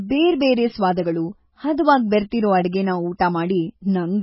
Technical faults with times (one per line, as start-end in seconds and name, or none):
0.00-4.22 MP3 compression